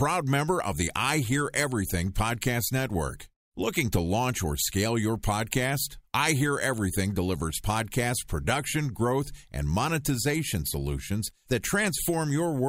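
Nothing goes wrong anywhere in this bit of speech, so there's no fault to point to at any moment.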